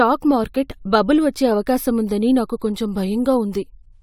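No technical faults can be heard anywhere in the recording; the signal stays continuous and stable throughout.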